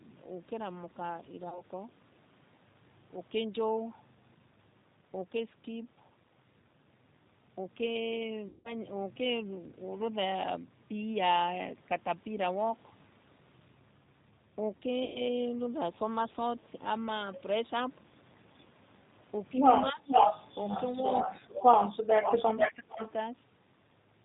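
The whole clip is speech carried by the G.729 codec at 8 kbit/s. Each 10 ms frame is rebuilt from a vocal tract filter, a pitch predictor and a few pulses. Nothing above 4 kHz survives. The voice sounds plainly rough and synthetic throughout.

Packet loss concealed by the speech codec strikes three times: 1.49 to 1.62 s, 8.49 to 8.75 s, and 15.05 to 15.22 s. The decoder stretches its last pitch and filter into a fading buzzy tone or coloured noise. The gaps fill 30 ms, 160 ms and 100 ms, and the voice stays weak briefly afterwards.

From 19.90 to 20.09 s the voice dips by roughly 15 dB. It dips deeper, by roughly 25 dB, from 21.80 to 22.30 s, and by roughly 30 dB from 22.50 to 22.99 s. This is likely speech suppressed in double talk. An echo canceller turns down both its own talker and the loudspeaker echo when it cannot separate them.

An echo leak, likely from a loudspeaker, follows from 20.06 to 20.83 s. 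A copy of the voice returns 438 ms late at about the same level as the speech. Another runs from 22.22 to 23.11 s, delayed 448 ms and about 5 dB quieter.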